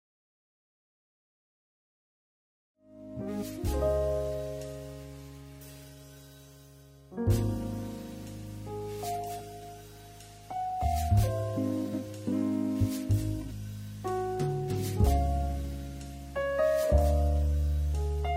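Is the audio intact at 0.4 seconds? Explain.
Yes, the audio is intact at 0.4 seconds, with no fault at that moment.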